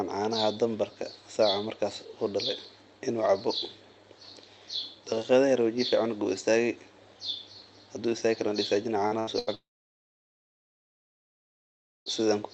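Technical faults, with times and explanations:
9.07–9.14 s, short concealed packet loss: about 40 ms is bridged by extending the preceding sound, giving a brief smear rather than the held buzz or hiss of a longer gap.
9.19–9.30 s and 9.39–9.50 s, burst of packet loss: each time about 80 ms is lost, and the continued sound fades audibly before the audio resumes further on, which a short concealment does not do.
9.55–12.09 s, long network dropout: the concealed tail fades within a moment, leaving about 2.4 s of silence; this length most likely reflects a network outage rather than packet bursts.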